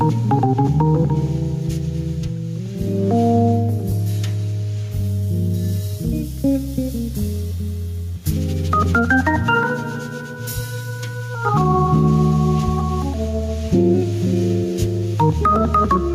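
Gain pumping runs through the whole clip. The swing is roughly 5 dB. Loud and soft passages sit closer together than they should, so the sound feels squashed and breathless. The likely cause is input gain set far too high, with a fast limiter or compressor clamping down on every peak and releasing between them.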